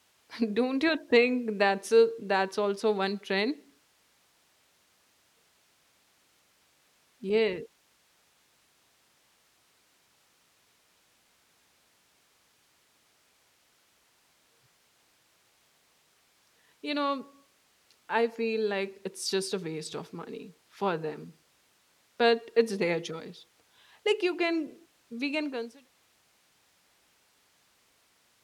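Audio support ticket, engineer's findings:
Findings: no fault in this speech clip; the level eases down in a smooth fade-out from about 25 s to 25.91 s, with no click or hard edge.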